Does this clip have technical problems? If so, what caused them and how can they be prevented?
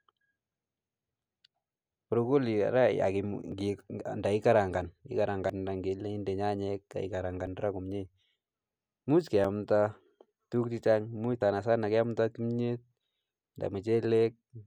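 Yes. There are brief skips in the speech at 1.55, 3.52, 5.5 (just before "ile under nyanyek"), 7.47, 9.45 and 11.42 s (between "tuguuk chechang much" and "keamdaa kimyeet"). They come about every 2 s, and each cuts out about 30 ms with the two sides butted together. This is likely audio missing between chunks: the recorder drops a sliver each time it closes one 2-second block and opens the next. To prevent it, use a recording or processing pipeline that double-buffers or overlaps its chunks, so no samples are lost at the handover.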